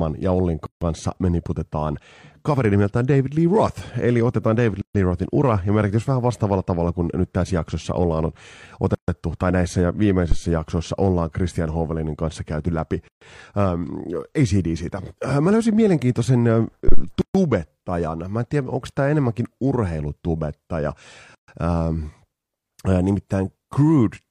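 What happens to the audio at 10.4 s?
A phantom power thump lands between 10.32 and 10.43 s. A supply on the live microphone input is switched, and that sudden DC step is pushed through the input's coupling capacitors as a single low-frequency pulse before they settle back. In the speech it comes through as a deep, dull thud underneath the sound, with the main body of the thump dying away within about 25 ms.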